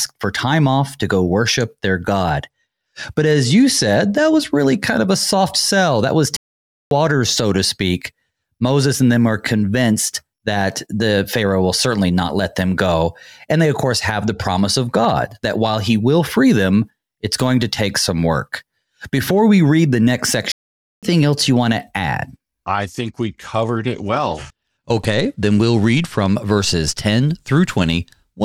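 Speech recording with two Bluetooth SBC bit pool drops, from 2.31 to 4.85 s and again from 22.79 to 26.36 s. The encoder appears to have cut its bit allocation to roughly half, pointing to a bit pool falling from 31 to 15. The treble dulls and gritty quantisation noise rises until the rate recovers. The sound also halts for silent gaps of 0.55 s at 6.37 s and 0.51 s at 20.52 s before resuming, likely playback stalls from the player running short of data.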